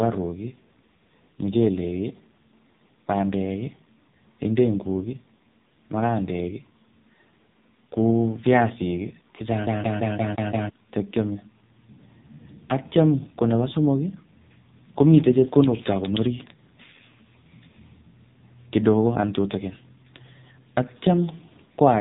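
Throughout, the speech carries heavy AMR narrowband mobile codec damage. Nothing passes above about 3.8 kHz, and the buzzy, synthetic tone suggests a low mode near 5.9 kbps. A spectrogram shows a hard ceiling there, with blurred harmonics changing in 20 ms steps.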